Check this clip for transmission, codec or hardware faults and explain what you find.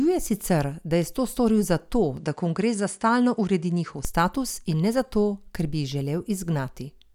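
One fault stands out. From 2.17 to 4.05 s the speech loses its top end, with nothing above 10.4 kHz, and carries a faint new background noise far below the voice. There is no gap at the change-over and no obvious jump in level. The likely cause is an input switched to a poorer device, whose narrower response and own noise floor replace the original microphone's sound until the original input returns.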